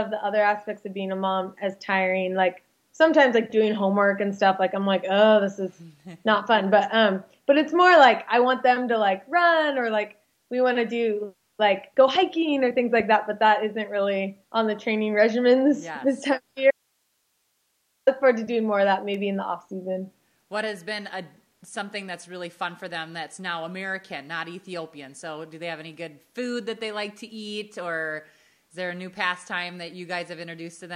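At 16.71 s the sound cuts off abruptly, leaving only faint hiss about 50 dB below the normal level until it returns at 18.07 s. This 1.36 s audio dropout to a faint residue likely comes from the signal being lost while the downstream path stayed live.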